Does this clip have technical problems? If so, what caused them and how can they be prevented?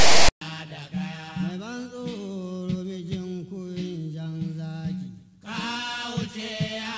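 Yes. From 0.00 to 0.41 s, file tags are played as audio: tag text read as samples gives a harsh, DC-offset rasp, then zero padding drops to silence. The waveform shows a lopsided, hard-edged block, and the spectrogram shows broadband static. Have the decoder skip metadata blocks before sample data starts.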